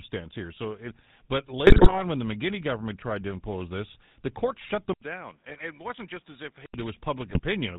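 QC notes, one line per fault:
Throughout, GSM full-rate codec. The speech has a buzzy, gravelly roughness and nothing above 4 kHz. The coder models the vocal tract and drives it with sparse, regularly spaced pulses, which fits a 13 kbps full-rate stream. The damage is plainly audible.
1.66 to 1.98 s, 5.49 to 5.61 s and 7.29 to 7.40 s, GSM bit errors. The speech breaks into squawks, pops and gargling. Corrupted filter, pitch and gain values reach the decoder, bending the spectrum or spiking the level frame by frame. The first burst is longest and has the highest error rate.
4.93 to 6.74 s, input likely switched to a poorer device. An 80 ms silence marks the switch. The sound then turns dull and boxy, with nothing above 4.3 kHz. It drops by about 10 dB and gains a faint new background noise, well below the speech.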